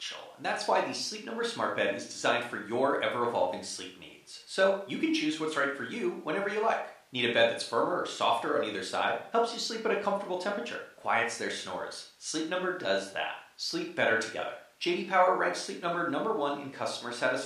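No technical faults occur anywhere in this speech recording, so there is nothing to place in time order.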